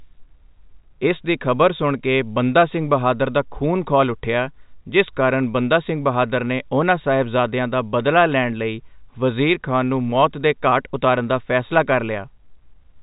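No faults are present in this speech clip.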